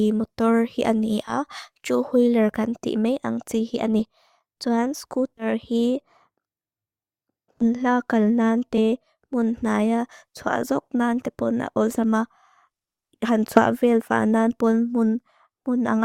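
Compressed frames skipped at 1.27–1.34, 3.99 (after "ang tí"), 5.37–5.46, 7.61, 8.77, 10.61, 11.93–11.97 (after "nante pon a") and 13.55–13.61 s. Each time, one to four 20 ms frames never reach the output, so the speech jumps ahead by roughly 20 to 70 ms. A spectrogram shows vertical seams where the harmonic lines step abruptly, and the waveform shows a sudden envelope change.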